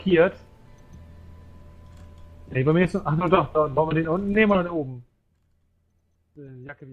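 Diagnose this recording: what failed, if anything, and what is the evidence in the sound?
Nothing in the signal chain has failed: the level is turned down or back up smoothly, as with a fader, with no dropouts, clicks, distortion or timing breaks at any point in the recording.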